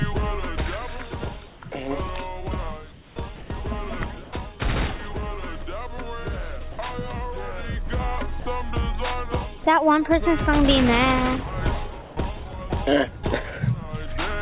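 The audio has passed through a narrowband call path with nothing above 4 kHz, and its pauses and some of its sound have been replaced by synthetic noise. From 1.48 to 1.62 s, 2.92 to 3.16 s and 4.24 to 4.32 s, comfort noise stands in for the background. There the room tone, sitting about 21 to 26 dB below the loud passages, turns into a steady, featureless hiss. It is at most about 1 dB quieter and barely changes in level. This is likely the sender going silent during pauses and the receiver filling the gap with shaped noise. What sets these apart is that only background is lost. The texture flattens, but nothing audible goes missing.

The sound dropped by the voice detector is different, because real material vanishes under the same kind of noise. From 3.36 to 3.50 s about 80 ms of sound is gone. At 6.72 to 6.78 s and 8.40 to 8.46 s about 60 ms each disappears, and from 12.02 to 12.16 s about 50 ms. 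The likely cause is the detector mistaking quiet sound for background and cutting it off until it triggered again.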